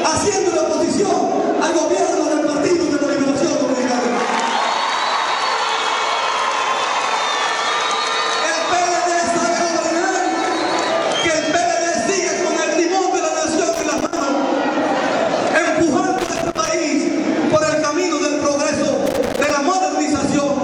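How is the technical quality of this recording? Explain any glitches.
The recording is marred by loose connector crackle in three bursts: 13.73 to 14.23 s, 16.19 to 16.68 s, and 19.06 to 19.51 s. A worn or dirty contact keeps making and breaking. This chops the signal into irregular scratchy crackle lasting about half a second each time.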